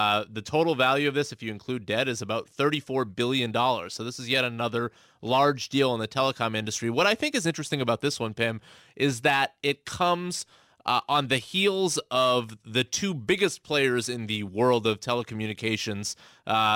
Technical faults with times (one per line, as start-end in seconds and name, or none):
0.00-16.75 sample clock jitter